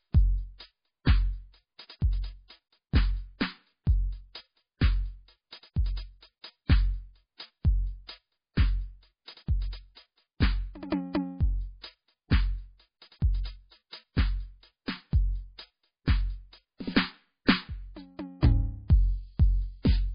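A music clip sounding dull and watery throughout, with nothing above 5 kHz and swirling, chirpy detail, likely from heavy MP3 compression at a very low bitrate, around 16 kbps. At 17.45 to 17.48 s, a brief hiss of about 31 ms precedes an attack and softens it. This is pre-echo: quantisation noise spread across the block leaks into the quiet moment just before the attack.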